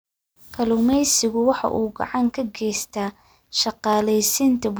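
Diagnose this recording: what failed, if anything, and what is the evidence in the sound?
Three sharp clicks break the speech, at 1.68, 3.03 and 3.93 s, each a thin vertical line across the spectrum. The likely cause is dropped samples in the driver or buffer stage. A fraction of a millisecond vanishes, so the waveform jumps abruptly.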